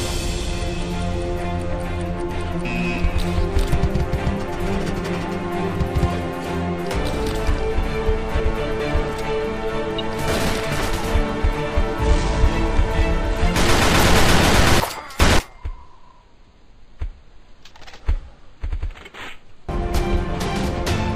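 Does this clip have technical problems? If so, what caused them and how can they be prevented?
Yes. There are chunks out of order at 8.4–8.8 s and 14.8–15.4 s. A 200 ms block lands one slot late in the first and two slots late in the second, so the sound briefly jumbles at the hard joins. Buffering and reordering blocks by sequence number before playback prevents this.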